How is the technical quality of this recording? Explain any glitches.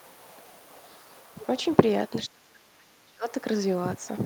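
The recording has one clear glitch, a stretch of speech suppressed in double talk. From 2.27 to 3.25 s the voice sinks by as much as about 30 dB. The likely cause is an echo canceller that heard both sides at once, could not separate the talker from the returning loudspeaker echo, and attenuated everything.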